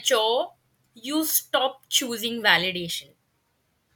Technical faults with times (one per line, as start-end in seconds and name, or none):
1.92 overlap between stream segments
2.90 overlap between stream segments